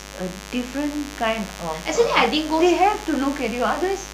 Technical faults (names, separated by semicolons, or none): mains buzz